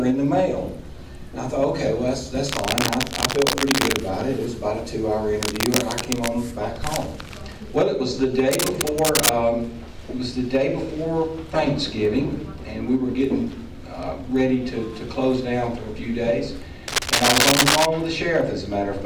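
A worn cable, connector or control being moved is the likely cause of the cable scratch noise here, its contact resistance changing rapidly and injecting dense, uneven bursts into the audio. Scratchy rustling sits over the sound from 2.48 to 4.05 s, 5.41 to 6.28 s, 8.51 to 9.29 s and 16.88 to 17.86 s. The bursts run roughly level with the wanted signal, a little quieter in the second and a little louder in the last.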